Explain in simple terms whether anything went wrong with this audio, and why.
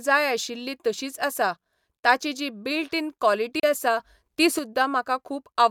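Two things went wrong in this speech recording.

The first is a digital broadcast dropout. For a brief moment the receiver stopped getting usable digital data, so it muted the output until good data returned. Just after "ताची जी बिल्ट इन", at 3.60 s, the sound fades out almost instantly and stays silent until 3.64 s. That gap of about 32 ms fits one lost frame, and whatever was sent during it is gone for good.

The second is a sudden gain jump. The volume setting was likely changed in one abrupt step instead of being eased in gradually. From 4.00 s to 4.59 s the speech suddenly becomes noticeably louder, and the background noise rises with it. Both drop back together at the end, so the loud patch has sharp edges instead of a natural swell.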